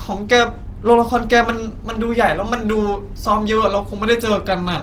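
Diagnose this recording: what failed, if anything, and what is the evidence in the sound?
The codec stage failed: the speech is grainy and rough from start to finish, which points to Opus compression, likely in its CELT music mode at a low rate near 16 kbps. Band energy survives, but detail is noise-filled, so a spectrogram shows speckled texture rather than holes, still reaching about 20.2 kHz.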